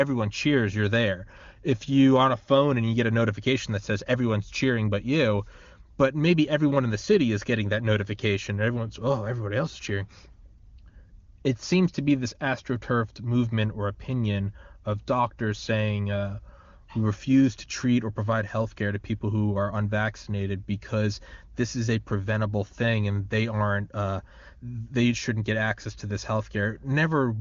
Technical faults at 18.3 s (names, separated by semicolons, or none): none